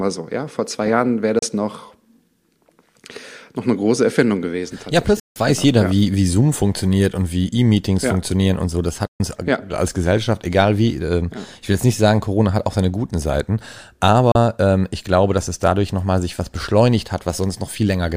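At 1.39, 5.20, 9.07 and 14.32 s, the speech mutes abruptly in a digital broadcast dropout. Each gap opens with a fade of about 3 ms. The holes last 32, 160, 128 and 32 ms, which fits one to five lost 32 ms frames.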